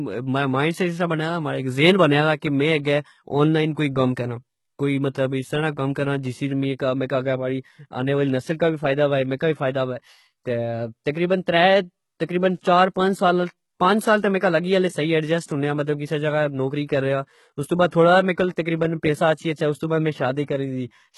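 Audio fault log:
Throughout: HE-AAC compression. The treble stays bright but sounds synthetic, with s sounds turned gritty and lispy and a metallic sheen over the speech; the likely cause is a low-rate coder that keeps only the lower band and rebuilds the top by copying it upward, which fits a bitrate near 16 kbps and heavy damage. On a spectrogram the upper band shows repeated, smeared copies of lower harmonics, misaligned above a sharp crossover line.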